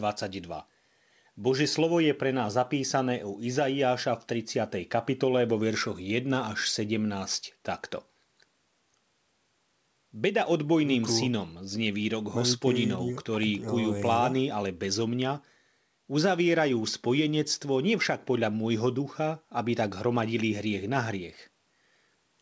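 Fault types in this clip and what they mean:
No faults can be heard in this speech clip. The call's microphone processing and codec leave nothing above 8 kHz, which fits a wideband call codec such as G.722.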